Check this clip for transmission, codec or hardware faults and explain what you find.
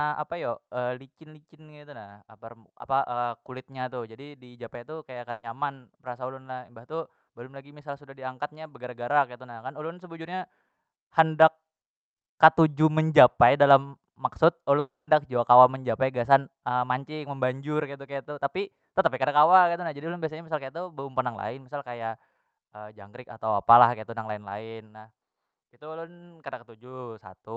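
Two transmission faults occur in this speech, carried over an Opus call path whose audio tops out around 8 kHz.

At 5.31 to 5.45 s, just after "jadi dijapai tu kaya", a burst of packet loss: about 120 ms went missing and the receiver stretched the last sound into a brief fading fill. It never falls to silence, which sets it apart from a dropout.

At 14.79 to 15.09 s, just before "jua kawa menjapai gasan", the sound is likely a long network dropout. A concealment fill fades out and then plain silence follows, about 180 ms of it. That silent stretch is what marks it as longer than a packet burst.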